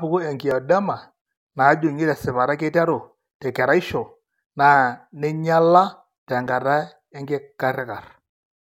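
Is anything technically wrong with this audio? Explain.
Yes, there are two tiny skips in this speech. Overlap between stream segments at 0.51 s and 6.47 s: overlapping 2-second segment timestamps make the player discard about 5 and 13 ms, producing jumps in the waveform.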